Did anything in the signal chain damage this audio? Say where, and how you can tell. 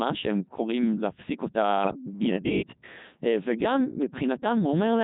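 Yes, it's the codec stage: a Codec 2 vocoder running the whole clip, with buzzy, robotic speech rebuilt from sine waves. The heavy damage fits its 3.2 kbit/s mode.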